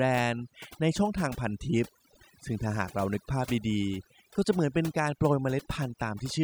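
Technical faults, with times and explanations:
Throughout: overdone noise removal. A noise reduction process applied far too aggressively pulls individual frequency bands down to nothing whenever their level sits close to what it has judged to be noise. The gaps between phrases collapse into near silence speckled with brief twinkling tones, and the quieter parts of the speech are stripped away along with the noise. Unlike a low-bitrate codec, the damage tracks the noise floor rather than the loudness of the speech.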